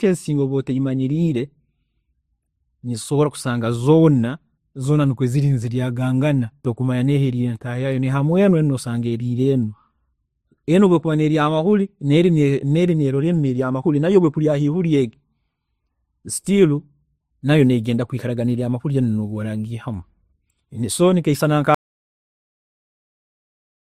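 Transcoding between lossy codecs runs throughout: the speech carries layered smearing and nothing above 15.8 kHz, which points to roughly 52 kbit/s MP3 re-encoded as Opus.

Audio dropout to silence at 21.75 s, right after "so nikeisana nka": the input was likely lost, leaving silence with no room tone until the end.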